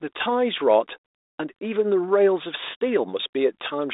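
No technical faults are present.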